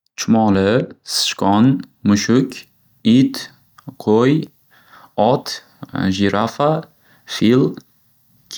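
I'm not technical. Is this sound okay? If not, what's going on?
No. From 0.55 to 8.37 s, periodic USB or driver dropouts skip around ten milliseconds of speech every 0.49 s, about fifteen times, heard as regular ticks.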